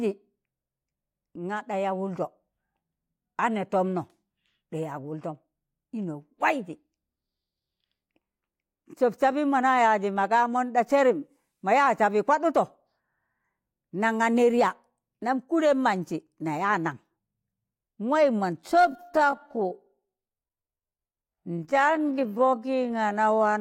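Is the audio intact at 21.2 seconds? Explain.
No. At 21.2 seconds the speech sits inside a time-stretched section running from 18.57 s to the end of the clip at 23.60 s. The pace drops abruptly to about 0.55 times normal speed while the pitch stays where it was, so the audio drags. This is likely the result of software lengthening the passage to fit a target duration, repeating short overlapping pieces of the waveform to add time without shifting pitch.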